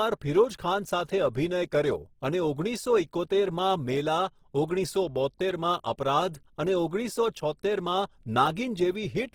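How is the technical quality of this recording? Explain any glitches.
The recording has clearly audible coding damage across the whole clip. From start to finish the speech sounds rough and grainy, with a noisy texture where tonal detail should be, which points to likely Opus compression in its CELT music mode at a low bitrate, which fits about 16 kbps. The encoder keeps each band's energy but, short of bits, fills bands with folded or noise content instead of leaving holes, so there is little swirl but much graininess. Bandwidth stays full, with content extending to about 20.3 kHz.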